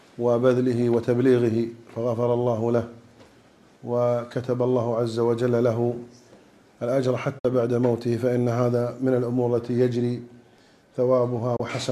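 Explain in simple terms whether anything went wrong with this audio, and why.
Twice the sound briefly cuts to silence: from 7.39 to 7.45 s, and from 11.56 to 11.60 s. This is a digital broadcast dropout. The receiver lost one or two data frames each time and muted with a very quick fade. Unlike a click or crackle, there's a clean gap, and the missing moment is skipped.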